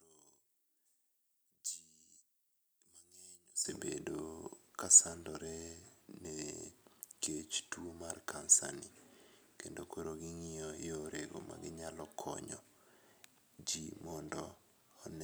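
A speech recording with one fault at the start. From 0 to 3.65 s the sound drops by about 13 dB. Centred content nearly disappears. The likely cause is one channel inverted, cancelling shared content on mono summing.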